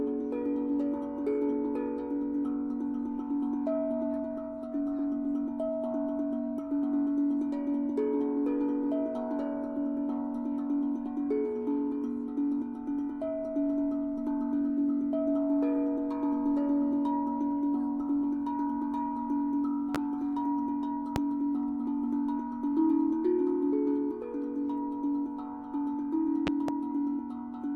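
Sharp loud pops cut through the sound at 19.95–19.98 s and 21.16–21.19 s, then a double pop at 26.47–26.72 s, each jumping roughly 15 to 20 dB above the sound, which continues underneath. Likely cause: sudden voltage pulses from a switch, plug, static or driver glitch.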